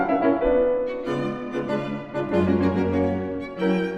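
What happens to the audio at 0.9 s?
Nothing goes wrong at 0.9 s; the audio passes through that moment intact, with no dropout, click, distortion or other fault.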